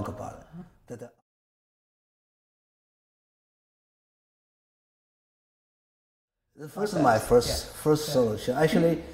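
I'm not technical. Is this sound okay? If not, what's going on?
No, there are two quick glitches from damaged data in a compressed stream: a brief blip at 0.61 s and another from 6.85 to 6.87 s, where corrupted bytes briefly confused the player's decoding.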